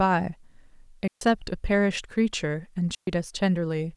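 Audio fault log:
1.08–1.21 s and 2.95–3.07 s, digital wireless dropout: the sound drops into two clean holes of near silence, lasting about 138 ms and 124 ms. Each time the radio link between transmitter and receiver lost more data than it could correct, so the receiver muted its output behind a very short fade. Because the receiver mutes rather than passing on corrupted data, no crackle or noise burst surrounds either gap.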